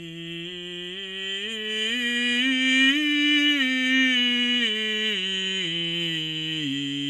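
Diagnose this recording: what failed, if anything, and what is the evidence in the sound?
Codec stage: generation loss throughout, swirly and hollow with blurred attacks and nothing above 12.5 kHz, likely from about ten MP2 re-encodes stacking quantisation noise.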